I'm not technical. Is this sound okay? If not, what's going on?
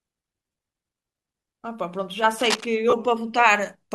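No. At 0.51 s and again at 2.90 s, the speech briefly turns into a short, hissy smear. These are lost LE Audio frames: the Bluetooth link dropped tiny chunks of sound, and the decoder filled each gap with a noisy copy of the moment before.

From 2.34 to 2.66 s there's a rough scratching, rustling noise over the speech. This is cable scratch noise, likely from a worn cable or connector being moved.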